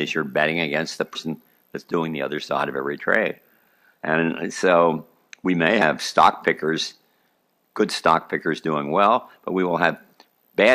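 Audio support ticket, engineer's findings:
Compressed frames skipped at 1.14, 5.81 and 10.13 s: audio jumps ahead about 100, 50 and 100 ms, consistent with whole 23.2 ms decoder frames dropped.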